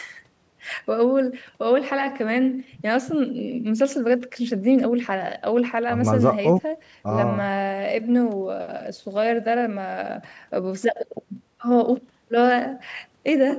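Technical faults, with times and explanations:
No technical faults to list; the call microphone processing heard on this speech is working normally.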